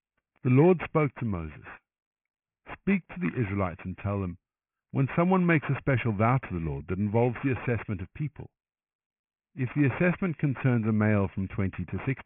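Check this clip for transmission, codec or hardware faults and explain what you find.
There's one fault here, aliasing, and it's present for the whole clip. The speech was evidently downsampled without an anti-alias filter first, and the band edge at 3 kHz fits a 6 kHz rate. Everything above that folds back as unrelated tones, roughly 15 dB under the speech, so sibilants come out gritty and metallic.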